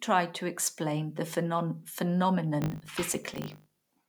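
A speech recording in which, from 2.62 s to the end, a filter restarted on every block adds a 50 Hz buzz, consistent with processing in 20 ms blocks. Each block starts from silence instead of carrying the previous state forward, so a small transient fires at every boundary. Unlike mains hum at the same frequency, this buzz follows the speech level, fading in pauses, and it switches on abruptly rather than running throughout.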